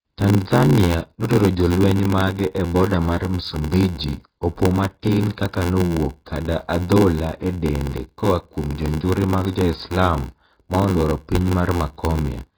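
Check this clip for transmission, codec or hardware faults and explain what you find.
Two faults run through the whole recording.

First, the sound is dull and smeared, with a warbly, fizzy edge on sibilants. That's likely heavy AAC compression at a very low bitrate, around 16 kbps. The encoder lowered its cut-off and starved the remaining bands of detail.

Second, there's a steady buzz at about 86.1 Hz and everything runs slow, at 0.861 times normal speed, with pitch roughly unchanged. That's a padded block size mismatch. Each block reaching the next stage comes up short, which fits a 512-sample read, so the rest gets filled with zeros. Those gaps repeat at the block rate and stretch the timing.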